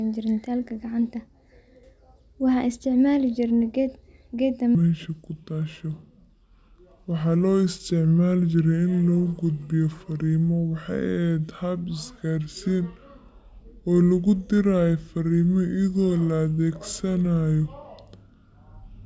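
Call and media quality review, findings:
Wrong sample rate from 4.75 s to end: speech drops to about two-thirds speed, roughly 7 semitones low. Playback path clocking audio slower than capture, consistent with 24 kHz material played at 16 kHz without resampling.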